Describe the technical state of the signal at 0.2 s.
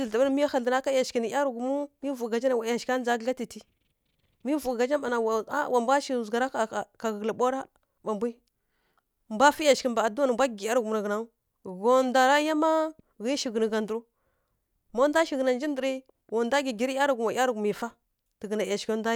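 The signal at 0.2 s is intact, with no audible fault at that moment.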